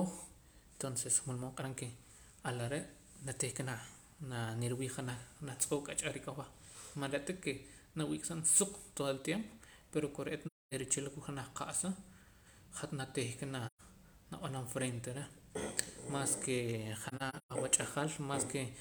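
AAC frame loss with muting at 10.46 s (256 ms), 13.67 s (128 ms) and 17.08–17.52 s (scattered gaps, longest about 150 ms): zeroed frames fade out and back in, leaving soft-edged silent holes, seen as blank spectrogram columns and tapered waveform gaps.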